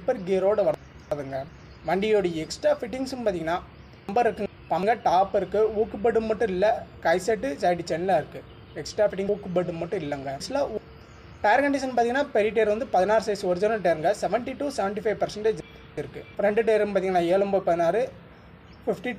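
Chunks out of order occur at 0.74–1.49 s, 4.09–4.83 s, 9.29–10.77 s and 15.60–16.35 s: blocks of about 372 ms play late and swap places, and at 9.29 s the displacement appears to span three blocks. Each swap is a jumbled stretch with hard joins.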